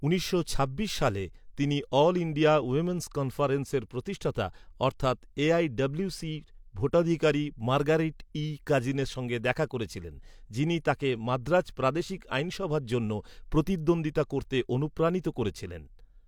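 No technical faults can be heard anywhere in the recording.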